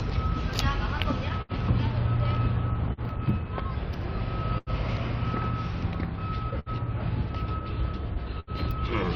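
Clock drift between sender and receiver runs through the whole recording. The sending clock is roughly 4 percent slow, so the receiver's buffer keeps draining and it has to patch in short repeats, producing small, unevenly spaced timing hiccups in the sounds.

Repeated stalls (stutter) occur from 1.03 to 1.52 s. Packets arrived too slowly, and the buffer emptied three times. The receiver held the last sound for about 96 ms in total, the longest wait 74 ms, so the passage drags and stutters without losing anything.

Short stalls from late packets occur at 2.93–3.00 s, 4.58–4.70 s, 6.59–6.69 s and 8.40–8.50 s. Each time a packet was late and the buffer ran dry. The receiver stretched the last sound for 44, 85, 68 and 75 ms respectively, then resumed exactly where it left off, leaving a briefly held sound with a slight buzz or dip.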